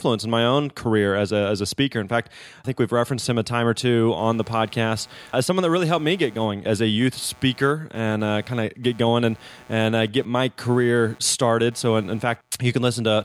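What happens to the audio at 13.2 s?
Computer activity noise is still running at 13.2 s. It began at about 4.19 s, just after "a time or two", and continues to the end of the clip at about 13.24 s. Changing load from the processor, graphics card or mouse disturbs the ground that the audio circuit shares with the computer. That comes through as a buzzing, chirping texture pulsing at something like 150 times a second, sitting roughly 30 dB below the speech and following the machine's activity rather than the speech.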